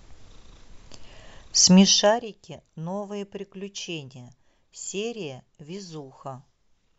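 Nothing in this speech recording stood out as a technical problem on listening.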